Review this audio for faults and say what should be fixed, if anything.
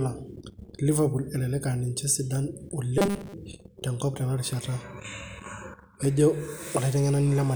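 Robotic sound from repeated short buffers, 2.98 to 3.34 s: a rigid, metallic 200 Hz buzz, likely from a 5 ms chunk replayed through most of that stretch. Enlarge the playback buffer and make sure fresh audio is delivered on time.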